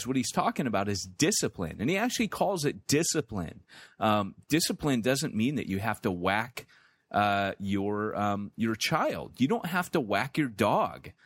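Listening to the speech here, nothing stood out as a technical fault at any point.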